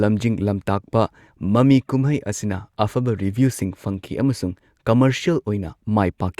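No technical faults can be heard anywhere in this speech recording. The sound stays consistent with itself at every moment, with no point where anything goes wrong.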